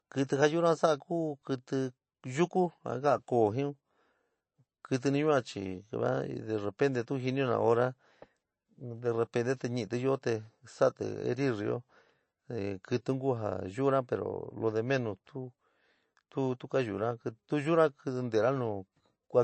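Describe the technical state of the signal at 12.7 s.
At 12.7 s you're hearing the same MP3 compression damage that runs through the whole clip. Nothing comes through above 8.3 kHz, and weak frequency lines flicker frame to frame, giving that watery, swirly edge. It's likely a starved MP3 encode, which fits a bitrate around 34 kbps.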